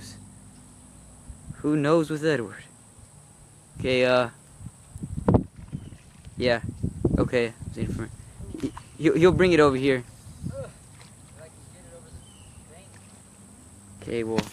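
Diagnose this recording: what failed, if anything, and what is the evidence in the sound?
No fault is audible.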